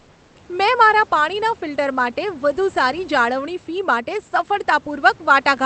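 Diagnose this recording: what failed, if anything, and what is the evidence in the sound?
For the first 0.35 s, comfort noise replaces the background: a smooth, featureless hiss about 2 dB quieter than the room noise after it. A noise gate would leave silence. This synthetic fill is likely generated by the codec's discontinuous transmission.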